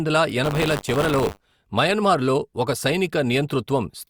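From 0.43 s to 1.56 s, just before "మయన్మార్ లో ఒక", there's buffer tearing: the app writing the ring buffer and the hardware reading it have drifted so they cross every period. A small slice of each buffer replays speech roughly 40 ms old, butted in with hard edges. You hear it as a steady robotic buzz at 100 Hz, which fits 10 ms periods, riding only on the speech itself.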